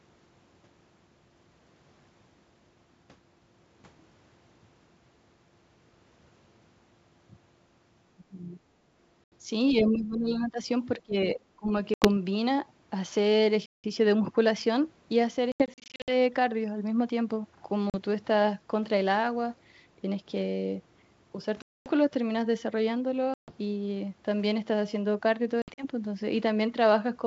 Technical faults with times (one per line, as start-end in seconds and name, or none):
8.16-8.61 speech suppressed in double talk
9.24-9.33 packet loss on an ADPCM call
9.70-10.59 speech suppressed in double talk
10.97-11.72 speech suppressed in double talk
11.94-12.09 packet loss on an ADPCM call
13.66-13.84 packet loss on an ADPCM call
15.52-16.14 packet loss on an ADPCM call
17.90-17.96 packet loss on an ADPCM call
21.62-21.88 packet loss on an ADPCM call
23.34-23.53 packet loss on an ADPCM call
25.62-25.85 packet loss on an ADPCM call